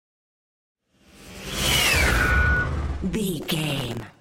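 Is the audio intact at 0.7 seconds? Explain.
Yes, the audio is intact at 0.7 seconds, with nothing at that moment to suggest a dropout, click, distortion or any other fault.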